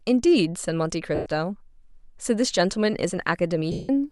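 A speech recording carries two kinds of technical fault. Twice, lost LE Audio frames left the receiving decoder without data, so it concealed the gaps by reusing the last good spectrum with scrambled phase and letting it fade. From 1.15 to 1.26 s (110 ms, which fits about eleven 10 ms frames) and from 3.72 to 3.89 s (170 ms), the speech turns into a hissy, smeared wash that decays instead of cutting cleanly, with the longer gap sinking further toward silence. The link is likely Bluetooth LE Audio using LC3, whose light coding leaves a faint grainy edge. Separately, video or display buzz appears at 2.36 s and runs to the end. A screen or video cable is leaking its 75 Hz field-rate signal into the audio path, adding a low, steady buzz with some harmonic hash above it. It sits faint but audible, roughly 45 dB below the speech, and is easiest to hear in pauses.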